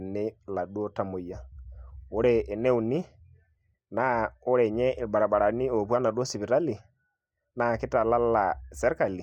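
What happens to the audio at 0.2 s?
Nothing goes wrong at 0.2 s; the speech carries on intact through that moment with no audible fault.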